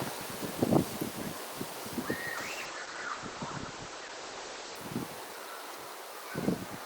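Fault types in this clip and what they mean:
Call bitrate drop: from 2.39 to 4.83 s, a lower bandwidth estimate starves the encoder, so the audio turns coarse and loses everything above 8 kHz.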